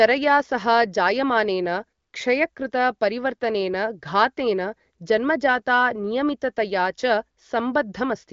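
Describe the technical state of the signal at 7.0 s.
At 7.0 s the speech is intact, carried cleanly through the AMR wideband (HD Voice) codec path with no fault at that moment.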